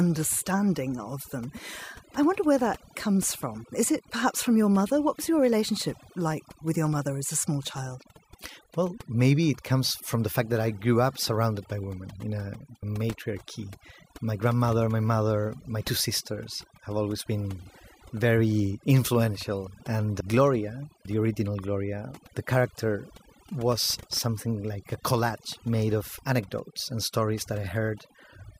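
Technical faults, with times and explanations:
Throughout: overdone noise removal. Noise reduction was set too hard, muting bands near the noise floor, so the background twinkles and quiet parts of the speech are lost with it.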